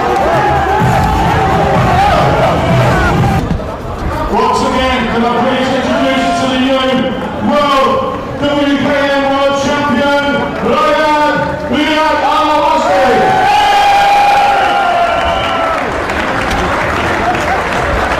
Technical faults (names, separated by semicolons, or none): none